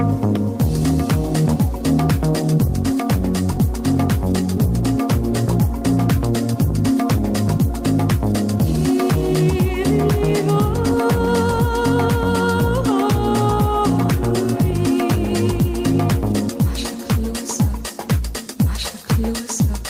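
No technical faults can be heard anywhere in the recording.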